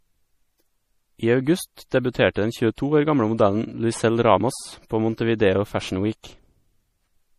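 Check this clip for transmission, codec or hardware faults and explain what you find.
There's one fault, and it runs through the whole clip: this speech has been squeezed hard by what is likely MP3 compression. From start to finish, nothing comes through above 15 kHz, and the codec damage is plainly audible. The encoder was short on bits, so it chopped the treble at a fixed point and dropped the weaker frequency detail, letting it flicker in and out frame to frame. You get a watery, swirly texture, chirpy s sounds and softened onsets, which fits a low bitrate of around 40 kbps.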